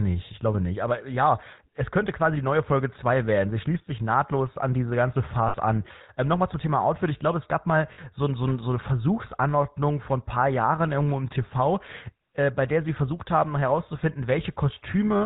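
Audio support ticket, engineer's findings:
Buzzy, gravelly roughness across the whole speech clip, plainly audible, with no content above 4 kHz. Component: GSM full-rate codec, consistent with the 13 kbps full-rate path. Mechanism: vocal-tract model driven by a regular pulse train, with only every third excitation sample kept. The coarse excitation produces the grit, and the band limit removes the top end.

Brief rough, metallic ring where speech should continue, at 5.48–5.56 s after "nahtlos an diese ganze" (about 60 ms), and at 7.94–7.99 s between "glaube es gab mal" and "so so so eine" (about 40 ms). Component: lost GSM frames. The decoder concealed the gaps by repeating the last good frame's settings, which fits roughly three and two dropped frames.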